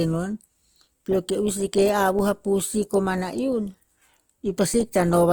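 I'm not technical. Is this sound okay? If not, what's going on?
No. The speech has a rough, grainy texture throughout, with a noisy edge on the voice. That points to Opus compression, likely at a fairly low data rate, where the encoder fills in missing detail with noise, so the damage is plainly audible.

At 2.19 s and again at 4.74 s there is a short low thump. Each is a DC step: the waveform's centre line suddenly jumps, then drifts back to where it started, while the speech carries on unaffected.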